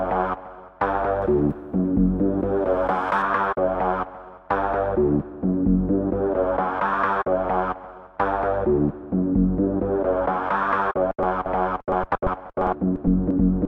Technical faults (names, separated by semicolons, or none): pre-emphasis left on